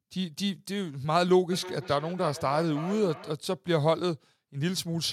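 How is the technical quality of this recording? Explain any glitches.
The recording has one clear fault, a feedback echo between two devices, from 1.52 to 3.38 s. Each word comes round again roughly every third of a second, peaking about 13 dB below the speech and growing thinner and more ringing with each pass. A second device in the room is replaying this microphone's signal, which gets picked up again, and neither echo canceller catches the other's output. On a waveform it looks like evenly spaced, shrinking copies, and on a spectrogram like faint, narrowing repeated smears.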